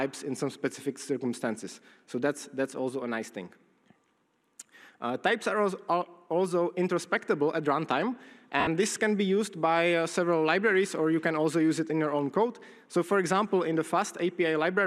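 From 8.60 to 8.67 s, lost LE Audio frames forced the decoder to reuse its last spectrum with random signs, smearing 70 ms of sound into noise.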